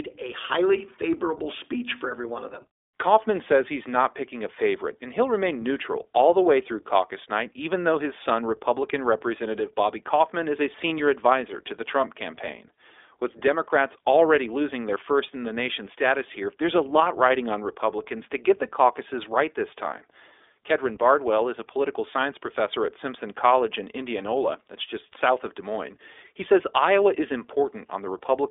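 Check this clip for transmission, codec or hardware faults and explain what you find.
One codec fault runs through the whole speech clip. From start to finish the speech sounds boxed-in, slightly rough and synthetic, with plainly audible coding damage and no content above about 3.7 kHz. This is the iLBC codec. It codes each 20 ms frame's excitation on its own, and the band limit of about 300 Hz to 3.6 kHz removes the brightness. The quality fits iLBC's 15.2 kbps mode.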